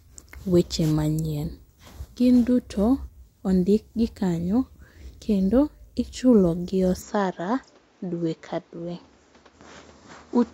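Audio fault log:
7.02 s to 10.54 s, input switched to a poorer device: right after "kendo ichulogi" the speech abruptly loses its top end, with nothing above 7.6 kHz, and takes on a different tone and a faint new background hiss sitting well below the speech, with no gap at the switch and the level about the same. The likely cause is the recording changing to another microphone mid-clip. The new noise floor and altered colour arriving together set it apart from a simple filter or codec bandwidth drop.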